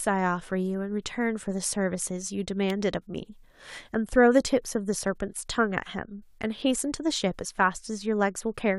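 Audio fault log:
2.70 s, electrical switching spike: a sharp snap or tight cluster of clicks lasting about 4 ms and peaking at about -20 dBFS lands on top of the speech. A nearby switch, motor or static discharge likely arced briefly, and the audio line picked up that burst as a click.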